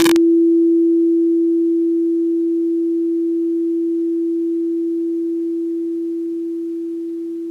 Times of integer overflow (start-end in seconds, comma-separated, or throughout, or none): 0.00-0.16